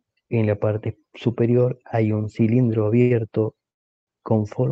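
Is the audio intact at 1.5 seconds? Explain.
Yes, the audio is intact at 1.5 seconds, with nothing there beyond the ordinary coding character and limited top end of the call path it passed through.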